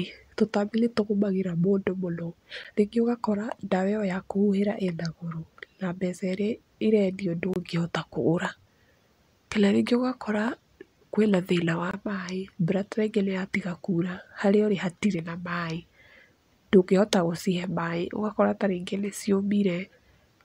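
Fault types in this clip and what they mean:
Block of digital silence: unfilled buffers cut the speech to silence three times, 12 to 23 ms; flat waveform gaps.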